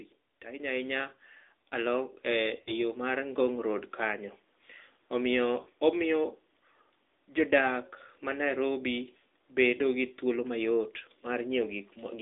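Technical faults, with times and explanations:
Throughout: AMR narrowband mobile codec. Speech is squeezed through a low-rate pulse-driven vocal tract model, leaving a buzzy, synthetic voice confined to 150 Hz–3.6 kHz, which fits roughly 10 kbps.
0.45–4.28 s: automatic gain rising. The gain control judged the input too quiet and gradually raised its level, so voice and background swell together by about 8 dB.
2.62–2.73 s and 5.62–5.68 s: lost AMR speech frames. Corrupted frames made the decoder repeat earlier settings at falling gain, giving a brief drawn-out warble and dip, consistent with about 40 ms lost.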